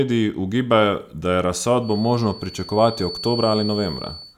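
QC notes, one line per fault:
1.80–4.38 s feedback whistle: a thin, steady 4.5 kHz whistle sits roughly 15 dB under the speech to the end, swelling and fading slowly in level. It holds rather than climbing into a howl, likely a loudspeaker-to-microphone loop balanced just at the edge of feedback.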